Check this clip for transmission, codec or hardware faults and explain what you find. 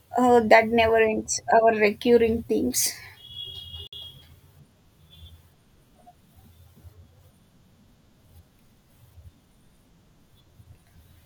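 There's one transmission fault, a short dropout in the speech from 3.87 to 3.93 s. The audio drops to silence for about 56 ms, then carries on. That pattern points to a Bluetooth stall. The likely cause is radio interference holding up packets, so the headphones' buffer emptied and playback paused until the resent data arrived. You hear it as a clean gap in the speech rather than crackle or distortion.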